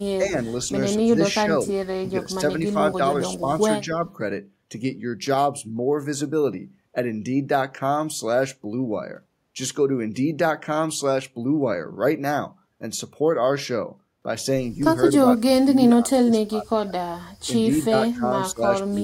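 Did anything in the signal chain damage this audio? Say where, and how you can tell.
Yes, in call processing. Speech ducks at 0.18–0.41, 1.03–3.01, 3.4–3.48, 15.12–17.09 and 17.47–19.03 s, by up to about 35 dB. This is likely speech suppressed in double talk: the echo canceller attenuated the near talker while the far end spoke.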